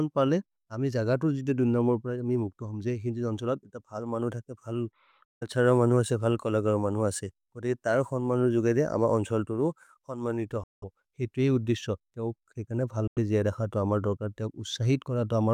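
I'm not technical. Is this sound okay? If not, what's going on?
No. The speech cuts to silence three times, at 5.25 to 5.43 s, 10.64 to 10.84 s, and 13.07 to 13.19 s. The sound then picks up further along, so a little is skipped. A likely Bluetooth dropout: the wireless link missed some audio.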